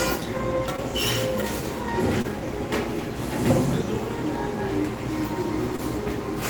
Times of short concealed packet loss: 0.76-0.80, 2.22-2.26, 5.76-5.80

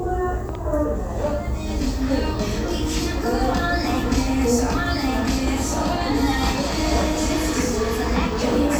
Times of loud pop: 0.49-0.57

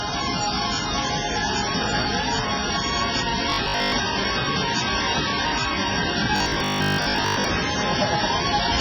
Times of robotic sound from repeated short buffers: 3.50-3.94, 6.36-7.46

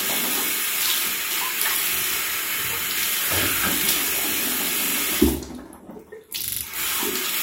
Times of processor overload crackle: none

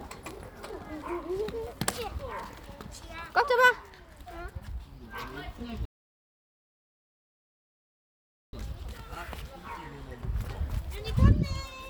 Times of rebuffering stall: 5.85-8.53

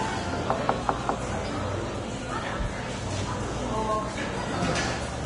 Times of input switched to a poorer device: none

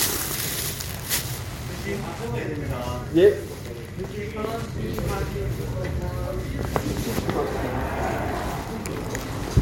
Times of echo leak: none

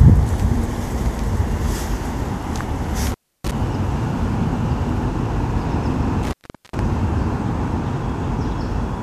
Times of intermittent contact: 3.07-3.52, 6.23-6.79

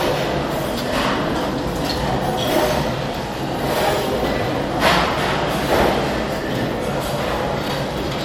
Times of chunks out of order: 2.52-2.56, 5.76-5.80, 7.64-7.70

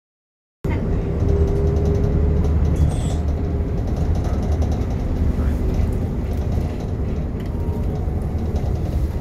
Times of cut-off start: 0.00-0.64

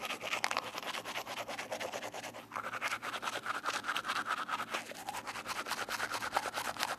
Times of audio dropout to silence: none

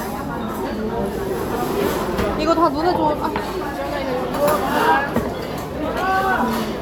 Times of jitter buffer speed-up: none

